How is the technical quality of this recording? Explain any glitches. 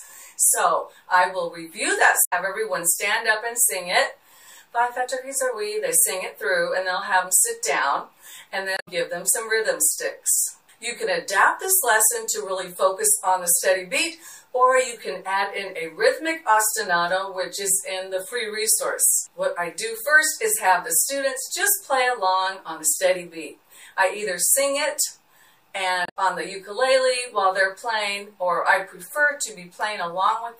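Three short glitches from damaged data in a compressed stream, at 2.24 to 2.33 s, 8.74 to 8.88 s and 26.03 to 26.17 s. The decoder hits corrupted frames, loses sync and hunts for the next header, so each one comes out as a brief chirp, squawk, click or short hole.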